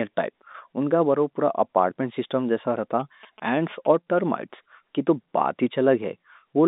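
A speech recording carried over a telephone-band link. At 0.52 to 0.54 s there is packet loss with pitch repetition. About 20 ms of audio goes missing, which fits one lost packet. The receiver fills the gap by repeating the last pitch period, so the speech briefly sounds held and slightly buzzy. From 3.00 to 4.19 s, GSM signalling bursts are heard. A nearby 2G phone is exchanging short radio bursts, and the audio circuit rectifies them into a galloping dit-dit-dit of short 217 Hz buzzes, well below the speech level.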